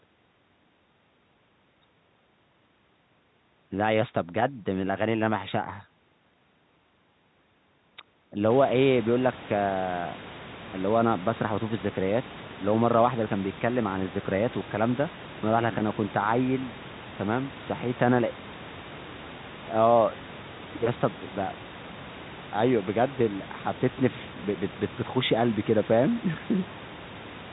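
No technical faults are audible.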